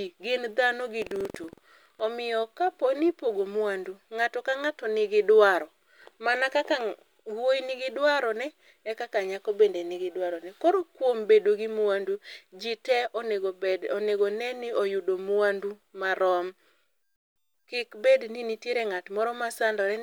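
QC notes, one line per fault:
0.98–2.01 s, buffer tearing: a steady robotic rattle at 21.5 Hz sits on the speech for this stretch. The write and read positions of the output ring buffer have drifted together, so every period, which fits a 2048-sample buffer, splices in a small slice, under a tenth of it, holding audio about a tenth of a second old. The hard joins on either side of each stale slice repeat at the buffer rate and produce the buzz.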